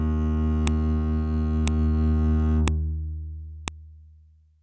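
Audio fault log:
0.67, 1.68, 2.68 and 3.68 s: file header played as audio. A sharp, loud click cuts through the music at each point, repeating once per second. This fits 1 s pieces joined with their WAV headers left in, so header bytes play back as samples.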